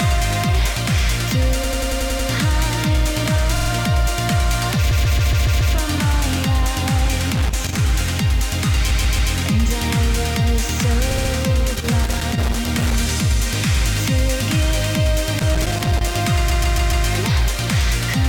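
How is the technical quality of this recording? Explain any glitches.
The recording has two recurring faults: repeated frames, which make the sound stutter six times, and loose connector crackle in three separate bursts.

Repeated frames occur at 1.63–2.28 s, 3.55–3.69 s, 4.90–5.74 s, 8.90–9.31 s, 11.10–11.31 s and 16.49–17.05 s. A short run of compressed frames was delivered more than once, so the decoder replays the same slice of audio. The looped block is 93 ms at 1.63 s, 46 ms at 3.55 s, 139 ms at 4.90, 8.90 and 16.49 s, and 70 ms at 11.10 s. Each block plays three to seven extra times, which matches blocks of a few codec frames each. The result is a stutter. Each event lengthens the audio by the repeated time, from 0.14 s up to 0.84 s at 4.90 s.

Loose connector crackle occurs at 7.35–7.79 s, 11.67–12.95 s and 15.39–16.15 s. A worn or dirty contact is making and breaking rapidly as it moves. 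This chops the signal on and off, and any DC on the line turns each break into a pop. It sounds like an irregular scratching, crackling burst over the sound. The longest burst lasts about 1.3 s, starting at 11.67 s.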